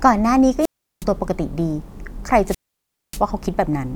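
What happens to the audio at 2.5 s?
At 2.5 s the speech falls into a wireless microphone squelch dropout, lasting from 2.44 to 3.22 s. The transmitter's FM signal weakens, hiss swells briefly, then the receiver's squelch mutes its output for about 0.59 s before the speech returns.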